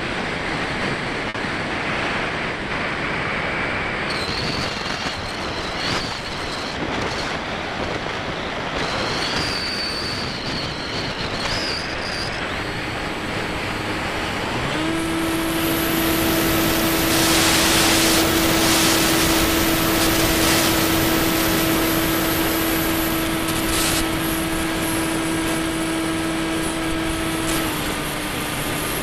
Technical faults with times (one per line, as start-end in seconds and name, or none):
1.29-1.37 short stall from a late packet